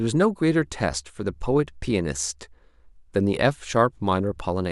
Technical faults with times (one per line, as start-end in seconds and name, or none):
none